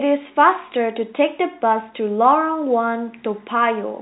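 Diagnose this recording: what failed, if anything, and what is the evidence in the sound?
Nothing failed; this telephone-band speech shows no faults.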